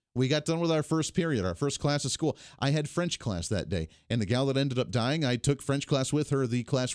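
No technical faults can be heard anywhere in this speech recording.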